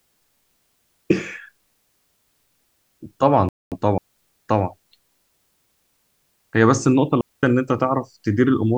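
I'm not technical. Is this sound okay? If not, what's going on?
No, there are a few gaps in this speech recording.

At 3.49 s the sound freezes into silence for about a quarter of a second, until 3.72 s, and then carries on. That's a playback stall. The likely cause is the player briefly running out of audio to play, or getting held up by something else on the computer, so it just waits until it can continue.

The other two gaps are different: a digital wireless dropout at 3.98 s to 4.17 s (about 190 ms) and another at 7.21 s to 7.43 s (about 220 ms). Here a digital wireless link lost too much of its signal, so the receiver simply muted. You hear a clean little hole of near silence, with no crackle or hiss around it, before the sound snaps back.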